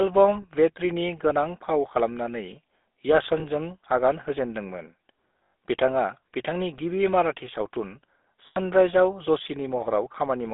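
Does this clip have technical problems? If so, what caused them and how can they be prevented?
Yes. The speech has passed through the GSM full-rate codec for the whole clip. It has a buzzy, gravelly roughness consistent with the 13 kbps full-rate coder, which models the vocal tract and excites it with a regular pulse train that keeps only a third of the excitation samples. The line band runs from about 250 Hz to 3.6 kHz, so all brightness above that is gone. The codec damage is plainly audible. Prevention: carry the call on a wideband or higher-rate codec instead of GSM full rate.

Lost GSM frames cause short dropouts at 0.42–0.45 s, 3.40–3.45 s, 5.39–5.54 s (just before "बिथाङा बिथांनि गिबि") and 8.46–8.58 s. In each gap the decoder repeats the last good frame's parameters, so the sound holds as a rough, metallic ring instead of going silent. The first two each lose one 20 ms frame. The third loses 120 ms scattered over 160 ms, with the longest run around a tenth of a second. 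The fourth loses 100 ms. Prevention: improve radio coverage or channel protection so fewer frames arrive corrupted.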